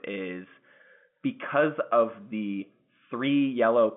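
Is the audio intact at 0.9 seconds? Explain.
Yes, the audio is intact at 0.9 seconds, with only the narrow band of the G.711 telephone coding, nothing above about 3.8 kHz, to be heard there.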